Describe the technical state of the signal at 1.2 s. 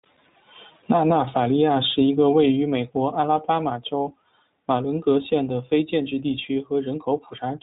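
iLBC codec damage at 1.2 s, present throughout: each frame, consistent with 20 ms framing, is coded independently, leaving rough, synthetic-sounding speech with nothing above 3.8 kHz.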